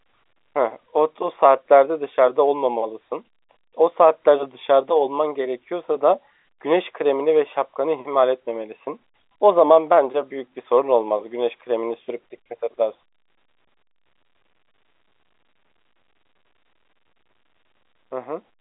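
Nothing stood out on listening to this speech over its narrow telephone-line band.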